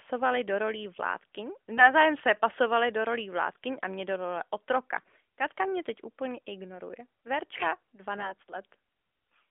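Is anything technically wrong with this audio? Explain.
Yes. There are AMR bit errors in this narrowband mobile speech, whose line band of about 200 Hz to 3.5 kHz fits AMR-NB at 12.2 kbps. From 1.78 to 1.93 s, after "do rolí vládkyň" and before "se pasovali do rolí", and again from 8.18 to 8.42 s, a few percent of the weakly protected frame bits arrive flipped. This misplaces excitation pulses and skews gain and spectral values, so pitch and level hold roughly steady while the voice turns briefly hoarse and gargly.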